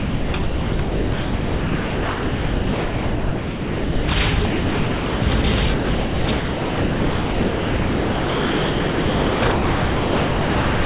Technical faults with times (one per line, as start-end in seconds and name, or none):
0.00-4.08 sound dropped by the voice detector
4.46-5.44 sound dropped by the voice detector
5.74-10.85 sound dropped by the voice detector